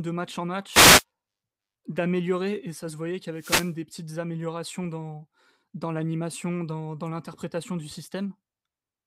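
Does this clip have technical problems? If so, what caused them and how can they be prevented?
Yes, two wireless microphone noise hits, at 0.71–1.04 s and 3.35–3.75 s. Each is a short static swish over the speech as reflected radio paths cancel the FM signal and receiver noise surges. A diversity receiver with clear line-of-sight antennas prevents this.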